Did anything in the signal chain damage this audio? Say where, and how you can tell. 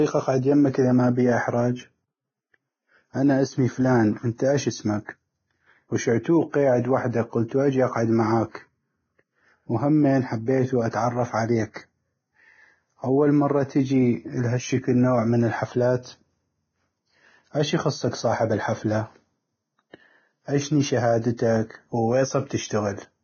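Yes. Vorbis compression damages the speech throughout, likely at the codec stage: nothing survives above 6.6 kHz, and the remaining treble is hissy and grainy, with roughened tones and smeared consonant attacks. Coarsely quantised residue has replaced fine detail with noise, which points to a very low bitrate near 17.5 kbps.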